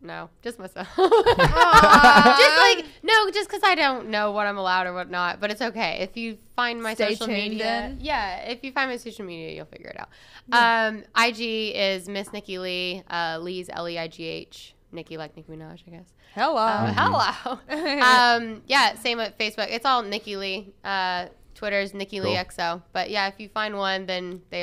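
Nothing stood out as a technical problem anywhere in this audio on listening.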